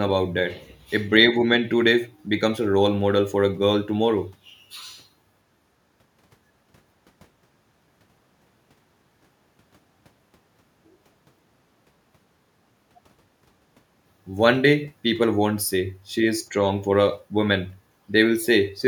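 Speech recording, no technical faults detected.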